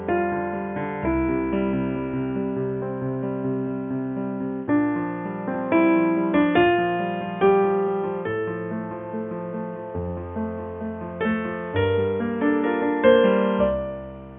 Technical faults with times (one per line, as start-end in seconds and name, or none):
none